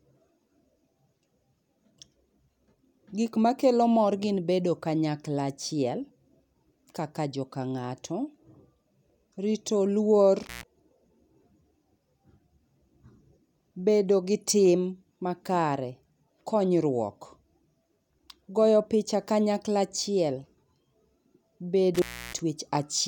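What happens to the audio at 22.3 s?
At 22.3 s the speech is inside an intermittent contact fault spanning 21.95 to 22.39 s. A loose cable or plug connection opens for about 307 ms, so the signal drops out, leaving only faint hiss, with crackle where the contact breaks and remakes.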